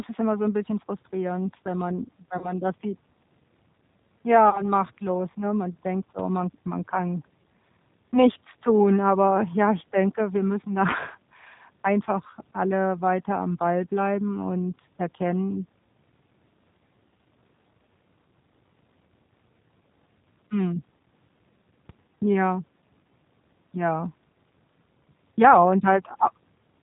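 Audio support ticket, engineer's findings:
G.729 codec, whole clip: speech cut off above 4 kHz, rough and slightly synthetic texture, consistent with an 8 kbit/s G.729 codec. The grainy, buzzy roughness rules out a simple low-pass.

VoIP packet loss concealed by the speech codec, 2.38–2.53 s (after "bisschen frustrierend wenn man", before "das sieht") and 4.50–4.70 s (before "machtlos ne"): about 30 ms of audio missing each time, fitting one lost packet. Decoder fills each gap with a fading extrapolated extension instead of silence, and the speech stays weak briefly afterwards.

DC step, 21.89 s: single low thump from a jump in the waveform baseline, decaying as a 20 Hz high-pass removes the offset. Unlike a dropout, the speech continues undisturbed.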